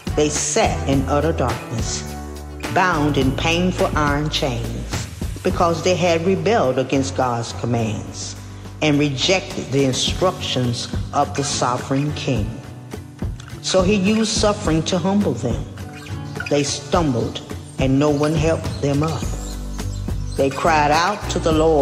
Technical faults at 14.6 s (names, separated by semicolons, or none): none